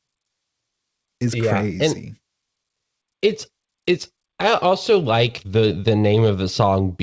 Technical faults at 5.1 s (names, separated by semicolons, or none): none